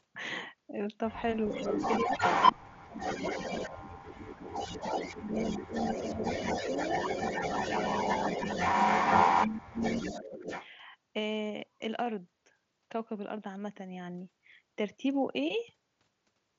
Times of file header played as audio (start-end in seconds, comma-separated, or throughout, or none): none